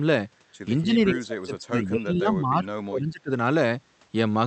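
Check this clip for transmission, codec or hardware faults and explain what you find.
One fault stands out, affecting the speech between 0.81 and 3.31 s. It is speech suppressed in double talk. The level sinks across that stretch, by roughly 25 dB at its deepest. In total, about two seconds of speech are pulled down. The likely cause is an echo canceller facing two talkers at once. It cannot tell near speech from loudspeaker echo, so it attenuates both. The talker dips. The call path itself carries audio up to about 8 kHz.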